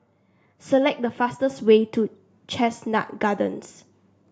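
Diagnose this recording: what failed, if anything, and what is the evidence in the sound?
A microphone volume stepped up at the call-processing stage: at 1.5 s the whole signal rises by about 5 dB in one step. Voice and background noise jump together, so the software raised the device input gain, unlike a talker simply speaking louder.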